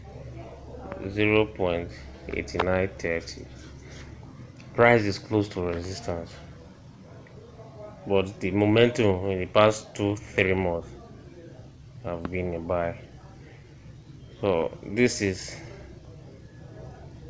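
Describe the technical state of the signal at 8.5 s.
At 8.5 s the signal is intact, with no fault, only the expected bandwidth of a G.722 call path that leaves nothing above 8 kHz.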